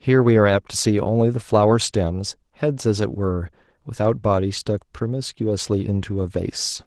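Opus voice compression runs throughout this speech clip, with plainly audible damage. The codec's low-band linear-prediction layer codes the excitation coarsely while a transform layer covers the top band. The resulting hoarse, slightly robotic texture fits a bitrate of about 16 kbps.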